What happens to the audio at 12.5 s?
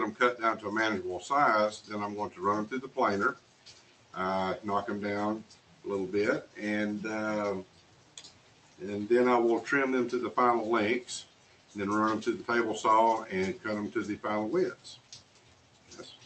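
A noise suppressor applied to music or sounds is acting at 12.5 s, as it does across the whole clip. Built for speech, it mistakes steady tones, ambience and reverb for background noise and pulls them down by around 10 dB, while sharp attacks pass largely intact. At 12.5 s the onsets punch through but sustained parts and decays sink, so the sound pumps and thins, all within the call path's 8 kHz band.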